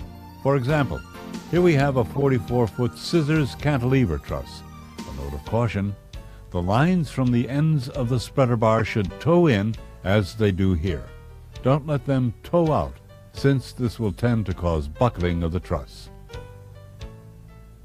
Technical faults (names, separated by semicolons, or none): corrupt frame decoded